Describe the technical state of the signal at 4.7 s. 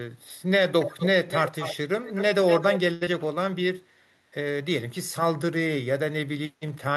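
At 4.7 s the signal is intact, with no dropout, distortion, glitch or other fault audible at that point.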